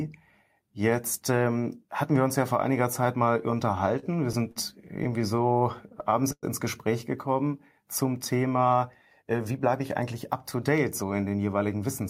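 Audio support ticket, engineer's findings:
Brief held sounds at 3.99 to 4.04 s and 4.51 to 4.58 s, with a slight buzz or dip. Short stall from a late packet each time. Jitter buffer ran dry, and the receiver stretched the last sound 29 ms, then 43 ms. Nothing lost, only delayed.

Dragging, stuttering delivery from 5.04 to 6.45 s. Repeated stalls (stutter): packets kept arriving late, and the jitter buffer emptied eleven times. The last sound was extended each time, 199 ms in total and 105 ms at the longest, about 14% of that stretch. Nothing missing.

Hurried speech at unchanged pitch, 9.22 to 11.03 s. Jitter buffer speed-up: the buffer was overfull, so the receiver trimmed short pitch-period slices repeatedly, playing at 106% speed and dropping about a tenth of a second of backlog.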